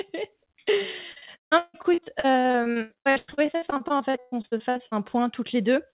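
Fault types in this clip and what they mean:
Repeated packet loss (robotic sound): from 1.12 to 4.96 s the speech breaks up in dozens of short holes, the longest 158 ms, each patched by repeating the last sound, so nearly half that stretch sounds choppy instead of simply going silent.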